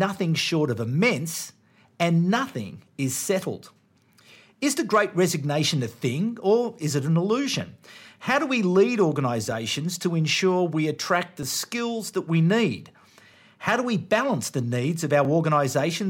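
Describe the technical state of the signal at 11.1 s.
At 11.1 s the signal is inside a run of clock drift buffer slips spanning 1.88 s, just after "short of immense", to 15.25 s. About seven clicks recur every 1.91 s, likely from two clocks differing by several hundred ppm, each slip dropping or repeating a few tens of samples.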